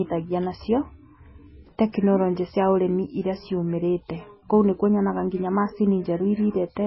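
Heavy MP3 compression runs throughout this speech, with nothing above 5.6 kHz, likely from a very low bitrate around 16 kbps starving the encoder, leaving watery, swirling artefacts.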